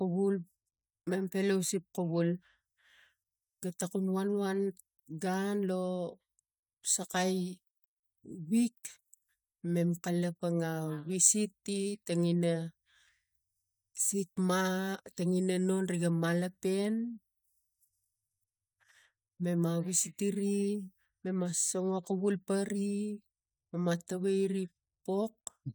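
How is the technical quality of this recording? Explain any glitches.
No glitches or technical faults turn up anywhere in the recording.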